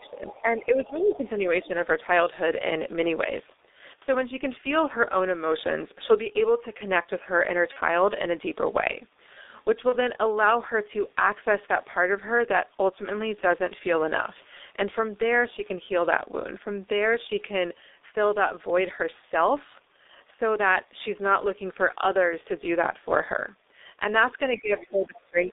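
A speech recording runs through the G.723.1 codec for its whole length. The band stops at about 300 Hz and 3.7 kHz. The voice sounds muffled and hoarse. Consonants smear, because the codec works in coarse 30 ms frames and tracks the voice slowly. The heavy damage fits a bitrate near 6 kbit/s.

The opening shows speech suppressed in double talk, from 0.00 to 1.24 s. The voice dips by about 15 dB and thins out for roughly a second in pieces. It dips again, by about 5 dB, from 1.61 to 1.71 s. The last stretch, from 24.50 s to the end, falls hardest, by about 25 dB. The likely cause is an echo canceller that cannot tell the talker from loudspeaker echo while both sides speak, so it turns everything down.

The other side's voice leaks through inside those same stretches: 0.30 to 0.42 s, 0.84 to 1.17 s, 1.63 to 1.68 s, and 24.78 to 24.91 s. Each scrap is faint, about 25 dB below the talker. This is likely far-end audio from the loudspeaker that the echo canceller failed to remove from the microphone signal.

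VoIP packet loss concealed by the speech codec appears twice, at 7.73 to 7.78 s and 9.90 to 9.94 s. Each gap fits one lost 30 ms frame. The decoder fills it by repeating its last pitch and filter at falling gain. The result is a short, fading smear. The voice stays weak or distorted just after each gap while the decoder recovers.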